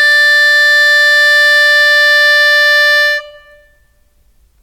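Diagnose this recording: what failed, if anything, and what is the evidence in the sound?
Nothing in the music points to a failure at any stage of the chain, from wiring and conversion through to storage and playback, and the signal stays continuous and intact throughout.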